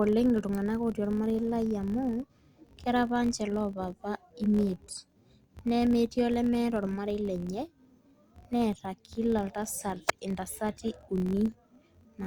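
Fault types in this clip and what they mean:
Filter restarted on every block: The filter loses its memory at each block boundary and restarts from zero. Each restart leaves a small click. They repeat at 46.9 Hz, a low buzz under the speech that follows its level. That rate fits a 1024-sample block.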